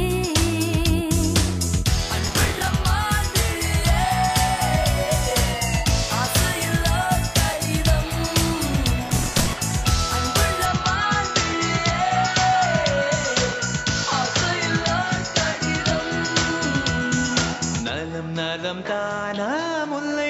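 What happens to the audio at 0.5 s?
Nothing out of the ordinary happens at 0.5 s, and the audio there plays through intact.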